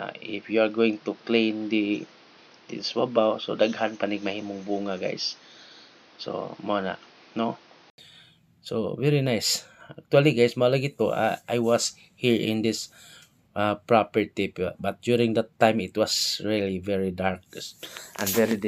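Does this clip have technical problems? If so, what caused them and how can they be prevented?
Yes: up to 7.98 s nothing passes above 6.4 kHz, then an 80 ms gap and full bandwidth; likely an input switched to a poorer device. Lock the input device before recording.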